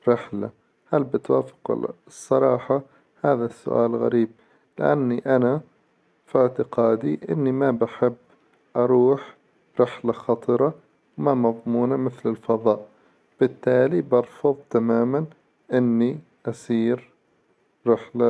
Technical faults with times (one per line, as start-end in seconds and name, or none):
none